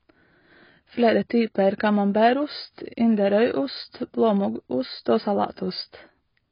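Speech throughout shows heavy AAC compression damage: nothing above 5.1 kHz and a dull, smeared tone, likely from AAC-LC at a very low bitrate around 16 kbps.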